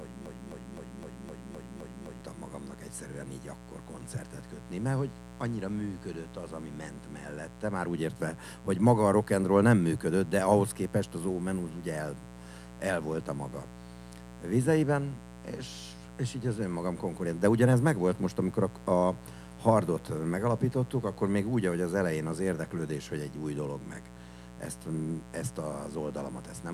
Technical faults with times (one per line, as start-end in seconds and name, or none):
0.00-26.73 mains buzz
0.00-2.21 broken-record loop